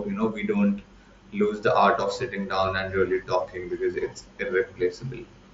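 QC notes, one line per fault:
No faults: the speech comes over the mSBC wideband Bluetooth headset link with its bandwidth topping out around 8 kHz and only the light coding texture that path normally leaves.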